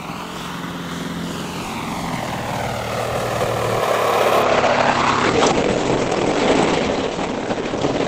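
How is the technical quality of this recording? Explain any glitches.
From 4.43 s to the end, the treble suddenly drops away, with nothing above about 8.6 kHz, and the sound turns thin and smeary, with no gap at the switch. This is an adaptive stream at a lower bitrate: a slowed connection forced a cheaper encoding, which fits a fall from roughly 64 to 12 kbit/s Opus.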